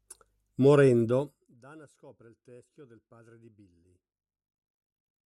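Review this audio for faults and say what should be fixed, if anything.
Zipper noise runs from 1.17 to 1.62 s, just before "scopre il teschio del". The speech drops by roughly 25 dB there. The drop happens in 1 dB jumps, about fifty per second, with no smoothing between them. Each jump puts a tiny click into the waveform. Together the clicks form a fast ticking buzz that rides on the speech while the level falls. To prevent it, ramp the gain sample by sample or interpolate it across each buffer.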